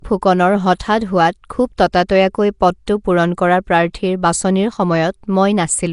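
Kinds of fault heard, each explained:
Nellymoser compression: the speech carries a rough, hissy, underwater smear throughout and nothing above 10.6 kHz, likely from Nellymoser Asao's coarse fixed-rate block coding.
Pre-echo: block-spread quantisation noise puts a hiss of about 10 ms ahead of sharp attacks at 1.77, 1.92, 2.86 and 3.93 s, softening them.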